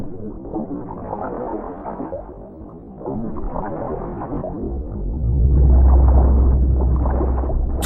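From 0 to 5.5 s there is a time-stretched section. The audio runs at about half speed, 0.503 times normal, yet the pitch holds steady. It drags. Software likely stretched it to fill a length, repeating short pieces to keep the pitch.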